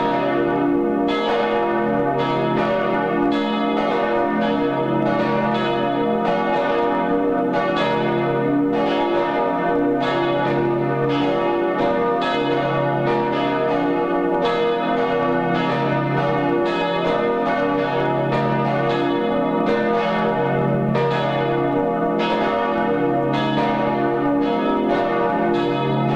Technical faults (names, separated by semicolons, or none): low bit depth without dither